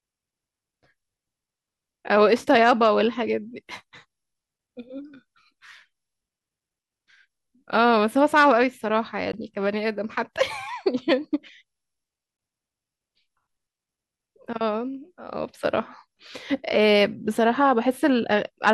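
Brief holes of about 14.5 ms cut into the speech at 9.32 s and 12.37 s, each with abrupt or briefly faded edges, and the sound picks up later as though it had kept playing. This is likely a Bluetooth dropout, with each gap fitting a single lost packet.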